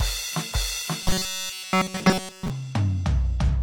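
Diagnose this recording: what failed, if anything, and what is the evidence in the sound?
From 1.02 to 2.50 s the music turns into a rigid metallic buzz at 188 Hz. This is robotic sound from repeated short buffers, likely at the driver or buffer stage, with a block of about 5 ms replayed in place of skipped audio. Unlike a codec fault, its pitch never moves.

At 3.44 to 3.49 s a brief glitch points to damaged data in a compressed stream at the codec stage. The decoder misreads corrupted frames and resyncs at the next header. A buffer repeat would hold a steady pitch, but this blip ends within 50 ms.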